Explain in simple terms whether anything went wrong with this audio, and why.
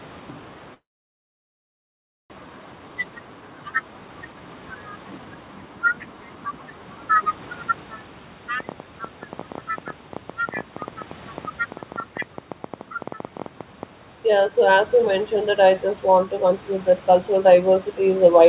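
At 0.74 s the sound cuts out in a long network dropout. Audio stopped arriving, most likely because of a network stall. A short fading buzz covers the gap, then silence. The sound returns at 2.34 s, with about a second of it lost for good.

Right after that, the jitter buffer speed-up begins. The receiver had built up about half a second of extra delay. It trims tiny slices of sound to catch up. From 2.41 to 3.42 s the audio runs 12% fast, and from 3.94 to 6.67 s it runs 15% fast. The pitch stays the same, but it sounds hurried.

From 8.60 to 13.84 s there is a train of clicks. Roughly ten sharp ticks come each second, at an uneven pace, about fifty in all. They sit on top of the sound and carry on through pauses. Electrical interference is the likely cause.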